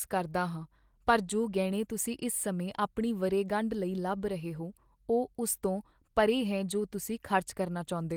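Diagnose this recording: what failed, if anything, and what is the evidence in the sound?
Nothing has failed here: the speech comes through as an ordinary Opus voice stream at 24 kbps in hybrid mode with the full band kept, and there's no stage in the chain I can point to as broken.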